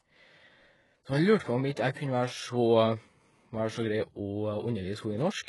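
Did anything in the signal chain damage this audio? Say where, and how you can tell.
Yes, at the codec stage. Throughout the speech, the treble sounds synthetic. S sounds come out gritty and lispy, with nothing above 11.5 kHz. This is likely HE-AAC compression at a very low bitrate, around 12 kbps. Upper bands are copied from lower ones, so harmonics misalign.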